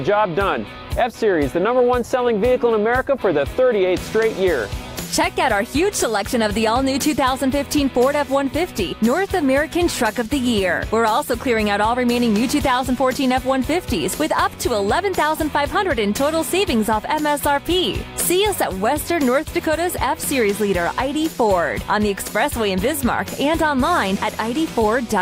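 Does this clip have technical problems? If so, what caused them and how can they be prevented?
No, there are no audible technical problems here.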